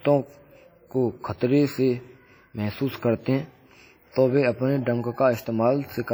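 Throughout the speech, heavy transform-codec damage is audible: the sound rings and smears, with a washy hiss that swells and fades with the signal, and quiet detail drops out where weak spectral lines have been zeroed. This is most likely WMA compression at a low bitrate, and the damage fits roughly 32 kbps. Unlike a plain low-pass or band-limited channel, the top end is not cut; content reaches about 20.1 kHz.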